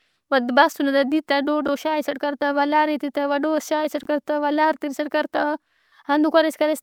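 A speech clip with two brief jumbled moments, from about 1.65 to 1.69 s and again from 4.03 to 4.06 s. Each sounds like a tiny garbled stutter. The fault is chunks out of order: one block of about 10.67 ms plays two blocks late. Nothing is lost, but the misplaced block creates three hard joins.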